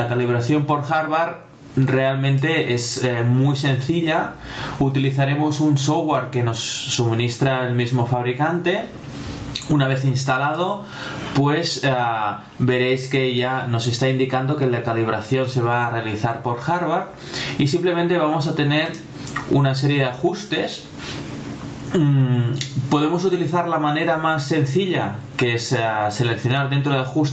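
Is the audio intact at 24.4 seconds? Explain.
No. Gain pumping runs through the whole clip, so it's there at 24.4 s. Loud and soft parts sit closer in level and the sound is squashed, a swing of about 25 dB, likely from a limiter fighting gain set far too high.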